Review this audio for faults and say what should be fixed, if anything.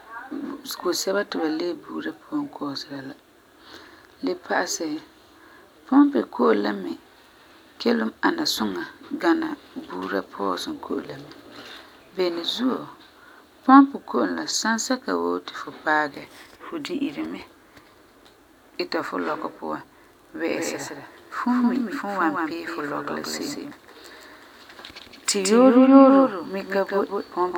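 Doubled audio track from 20.5 s to the end: a second full-band copy of the speech, about 5 dB quieter, trails by roughly 150 ms, likely from a second, slower capture path. Route the signal through a single capture path and mute any duplicate input or monitoring return before recording.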